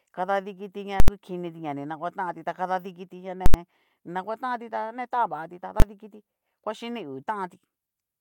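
Speech, with three bursts of invalid numbers at full scale. A calculation produced infinite or invalid values, and each was pinned to one extreme value for a whole block. Right after "kadadikiti ña", from 1.00 to 1.08 s, an 80 ms block gives a loud pop at each edge with silence between. A second 80 ms block runs from 3.46 to 3.54 s, just before "ni naguatanti ta ne". From 5.80 to 5.82 s, a 20 ms block sounds as one bang.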